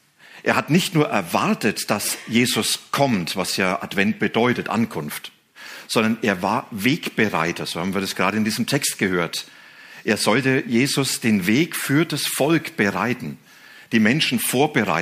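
Nothing goes wrong anywhere in the clip, so there's no fault to point to at any moment.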